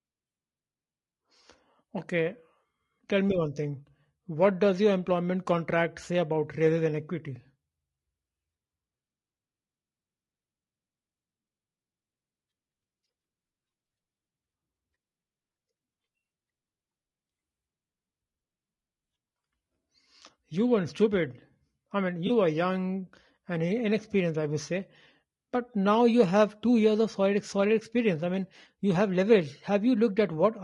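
A speech clip with two technical faults. Throughout, the voice sounds rough and grainy. Noise fills the gaps between harmonics, and the top band sounds thin and synthetic. The likely cause is low-delay AAC compression (AAC-ELD). Its short frames resolve pitch poorly, and the damage fits a bitrate near 32 kbps. From 22.27 to 22.31 s, between "weren't stupid I mean" and "were young and", there is a brief smeared, noisy patch. This is AAC frame loss with concealment. About 20 ms of audio went missing, consistent with one lost frame. The decoder rebuilt it from the last good spectrum.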